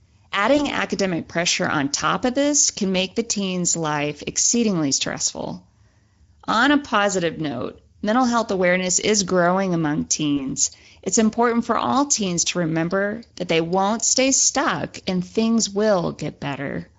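The clip is speech, and it carries Speex codec damage from start to finish. The damage is plainly audible. The voice sounds hoarse and noisy, because the codec has too few bits to model the excitation well. The texture fits a middle Speex setting of about 17 kbps. Packet loss concealed by the speech codec occurs twice, from 0.57 to 0.67 s and from 10.37 to 10.43 s. Each sounds like a single lost 20 ms packet. The decoder fills the gap by extending the last pitch and filter at falling gain, which gives a brief, fading smear. The disturbance lasts longer than the gap itself because each rebuilt frame feeds the next one.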